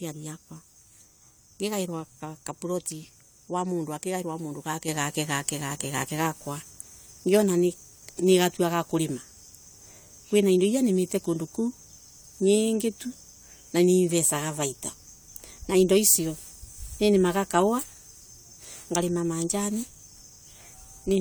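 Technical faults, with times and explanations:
Nothing technical stands out here; the speech comes across without any faults worth noting.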